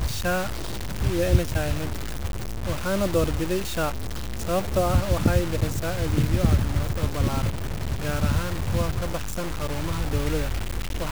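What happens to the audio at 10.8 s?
Low bit depth without dither is audible at 10.8 s, as it is through the whole clip. The speech is coarse and grainy, with a harsh distortion that rises and falls with the voice and sits only about 10 dB below it. The likely cause is truncation to around 5 bits with no dither, so the rounding error tracks the signal: quieter moments turn gritty, and the faintest ones sputter or drop to silence.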